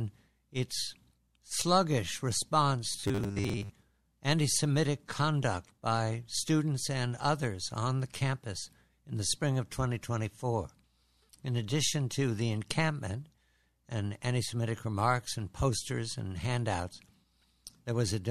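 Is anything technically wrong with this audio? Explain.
Yes. From 2.88 to 3.73 s there is robotic sound from repeated short buffers. The likely cause is new audio arriving too late, so playback filled the gaps by looping the most recent fragment of about 10 ms while the incoming material was skipped, with roughly half the sound in that stretch being repeats. The looping stamps a fixed 100 Hz pitch on the audio, turning it into a hard, metallic buzz that only loosely tracks the original.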